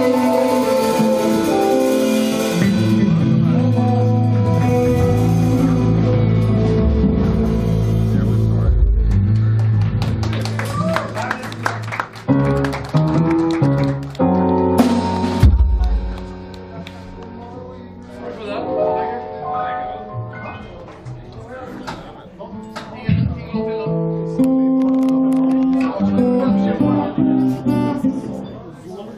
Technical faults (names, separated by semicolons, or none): none